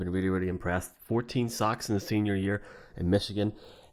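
A speech recording whose two channels drift apart from start to finish. The left and right sides appear to come from devices on separate clocks, roughly 150 ppm apart, so the delay between them creeps up to a fraction of a millisecond by the end. Summed to mono, the comb notches glide slowly through the spectrum, giving a slow flanging sweep. A fixed inter-channel delay would instead leave static, unchanging notches.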